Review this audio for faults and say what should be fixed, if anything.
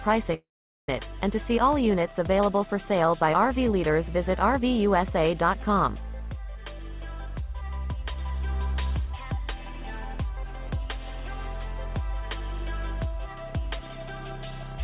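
At 0.32 to 0.34 s there is a short concealed packet loss. About 10 ms of audio arrived too late for the decoder, and the receiver bridged the gap by extending the preceding sound before rejoining the real signal, leaving a brief smear or wobble. It differs from a dropout because it is over within a couple of hundredths of a second. Deepening the jitter buffer slightly, or adding forward error correction, would let such isolated late packets be recovered instead of concealed.

Immediately afterwards, from 0.34 to 0.89 s, the signal gives way to a fading continuation of the last sound and then roughly 0.43 s of silence before the audio resumes. This is likely a long network dropout: about 0.54 s never arrived, so the concealment could only carry on briefly before falling quiet. Unlike the short loss, the gap is long enough to hear as a hole, and the lost material is not recovered when the sound returns. 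The band limit at 4 kHz, which fits a narrowband G.711 A-law call path, belongs to that codec and is not part of this fault. Preventing it means addressing the link itself, such as congestion, Wi-Fi handoffs or route changes, and using redundancy to cover longer bursts of loss.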